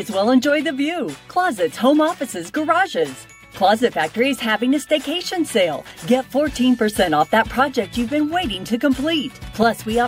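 No technical faults can be heard anywhere in the clip.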